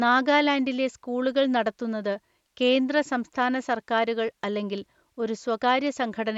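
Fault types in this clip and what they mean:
Nothing stood out on listening to this speech, which comes over a wideband Bluetooth headset link with its top end stopping near 7.7 kHz.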